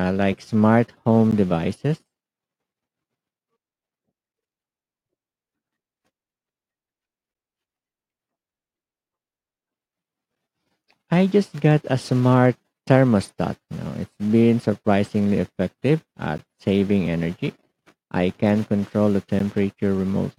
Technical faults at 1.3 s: gap between chunks

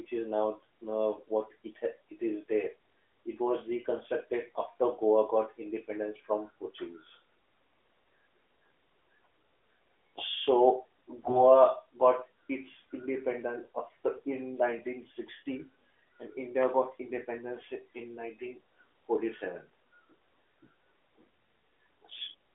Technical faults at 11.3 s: AMR bit errors

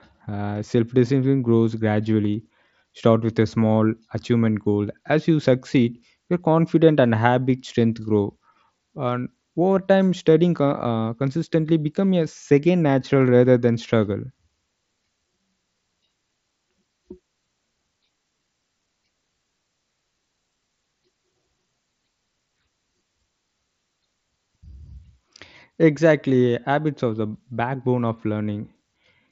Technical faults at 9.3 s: none

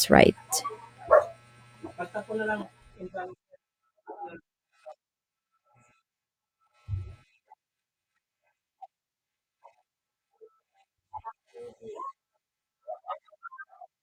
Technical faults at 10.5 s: sudden gain jump

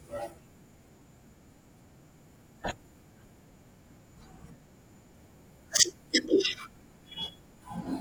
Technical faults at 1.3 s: none

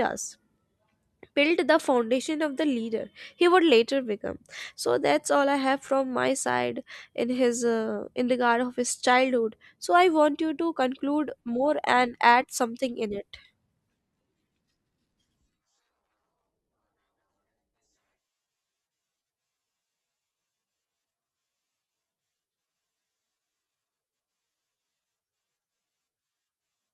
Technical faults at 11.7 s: none

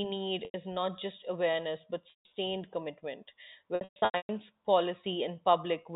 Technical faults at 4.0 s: packet loss with pitch repetition

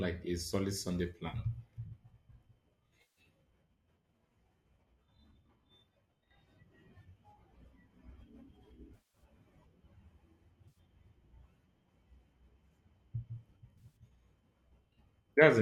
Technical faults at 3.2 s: AAC frame loss with concealment

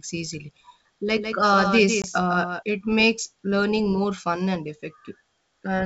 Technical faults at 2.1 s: doubled audio track; packet loss on an ADPCM call

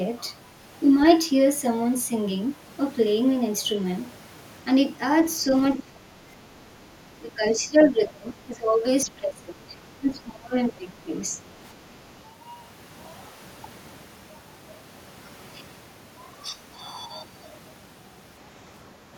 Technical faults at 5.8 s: other side's voice leaking through; speech suppressed in double talk

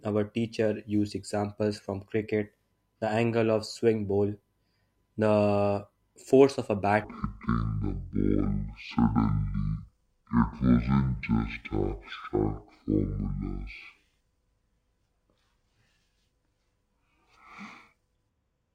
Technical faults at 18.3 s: stereo read as mono

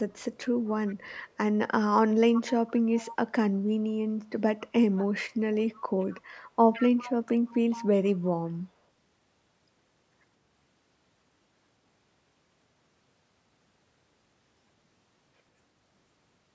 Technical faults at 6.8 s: echo leak

